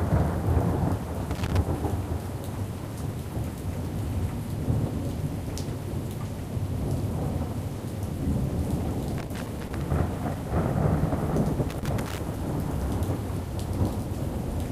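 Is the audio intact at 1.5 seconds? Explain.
No. At 1.5 seconds the audio is caught in a burst of loose connector crackle, running from about 1.31 to 1.57 s: an irregular spray of crackling and scratching that chops up the sound. It comes from a worn or dirty contact that keeps making and breaking as it shifts, so the signal is repeatedly cut in and out, and any DC on the line turns those breaks into pops.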